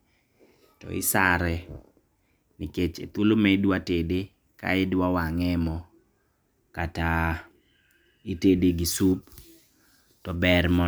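A speech recording with nothing technically wrong with it.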